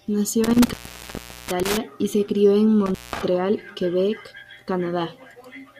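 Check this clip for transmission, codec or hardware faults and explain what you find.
Two dropouts from an intermittent contact. From 0.44 to 1.77 s, right before "y se crio en", the speech cuts out for about 750 ms, then again from 2.86 to 3.21 s, just after "y se crio en", for about 190 ms. A loose plug or cable is briefly opening the line, giving crackle at each edge and faint hiss in between.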